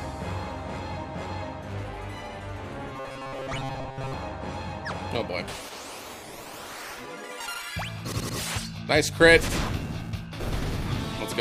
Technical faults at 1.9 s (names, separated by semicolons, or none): none